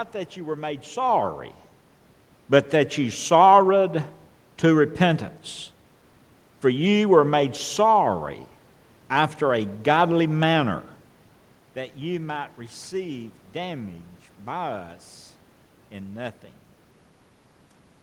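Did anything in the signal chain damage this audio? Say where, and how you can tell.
No, nothing in the signal chain stood out on listening: the background is the room itself, and the level changes near 1 s and around 11.5 s sound like the talker shifting position relative to the microphone.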